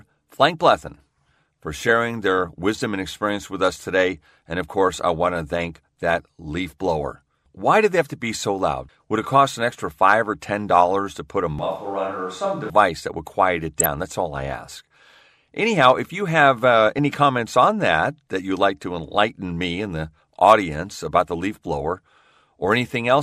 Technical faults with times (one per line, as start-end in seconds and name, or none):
11.59-12.70 switch to a distant microphone
13.80-13.86 DAB burbling
16.99 DAB burbling